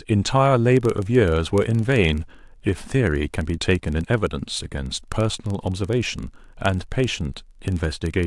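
From 0.68 s to the end, the speech carries a block size mismatch (padded). One stage hands over blocks slightly shorter than the next stage reads, and the missing samples are filled with zeros. The result is a tiny silent gap repeating at 23.4 Hz, which fits 1024-sample reads. It is heard as a low, rough buzz under the speech. Because each gap is so short, the speech runs at essentially normal speed and pitch. On a waveform, the gaps show as regularly spaced dropouts. On a spectrogram, they appear as vertical lines every 43 ms or so.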